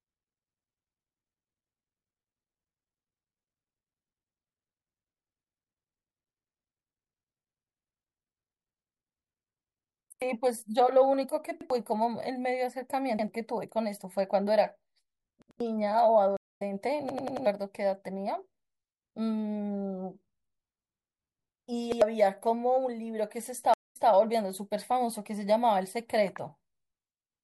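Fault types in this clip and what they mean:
Repeated buffer: New audio failed to reach the output in time, so the device replayed its last block, about 93 ms long, which fits a 4096-sample buffer. Each repeat is a hard-joined stutter in the speech, played once more at 10.12, 11.61, 13.19 and 21.92 s, twice more at 15.42 s and four times more at 17.09 s. Each repeat costs roughly a tenth of a second of the original audio.
Stream reconnect: The connection dropped, the player fell silent, then reconnected and began decoding mid-stream with a fresh decoder. At 16.37 s the speech stops for 212 ms and picks up around a fifth of a second further on, so material is skipped. At 23.74 s a 187 ms gap is followed by a restart 183 ms earlier, as if the server resent a burst, and a short stretch of speech is heard twice.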